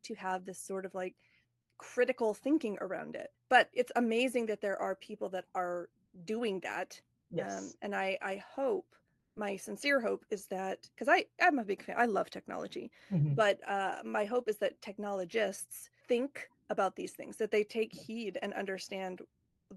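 Four short gaps in this speech get comfort noise in place of the background, likely from Opus discontinuous transmission: the sender goes quiet in pauses and the receiver fills in smoother synthetic noise. At 1.61 to 1.69 s, between "this sort of like" and "critical thinking around it", the floor drops about 8 dB. After "that are doing that", 7.21 to 7.29 s dips about 3 dB. Between "and I I hope" and "my sincere hope is", 9.19 to 9.35 s sits about 1 dB lower. The final 19.45 to 19.69 s is about 2 dB down. The real background is around 50 dB under the loud parts, and the call codec's band limit sits near 12 kHz.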